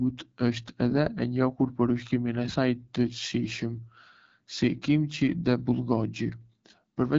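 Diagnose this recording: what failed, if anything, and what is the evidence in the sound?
Codec stage: AMR wideband (HD Voice) codec damage throughout. The speech sounds rough and raspy, with nothing above 7.6 kHz, which fits one of its lowest bitrates.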